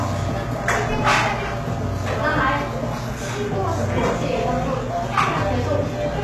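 From start to finish the treble is synthetic rather than real. Nothing reaches above 12.3 kHz, and the upper band has a bright but gritty, metallic sheen that does not line up with the body of the sound below it. The likely cause is HE-AAC compression with heavy damage, consistent with a very low bitrate of around 16 kbps. Spectral band replication copies lower bands upward under a coarse envelope, so the highs are rebuilt rather than preserved and their harmonics misalign.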